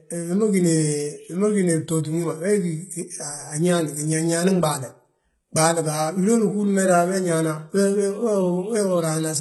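Throughout, the speech shows heavy artefacts from likely HE-AAC compression at a low bitrate near 16 kbps: synthesized treble that cuts off at 11.8 kHz, with gritty, metallic sibilants.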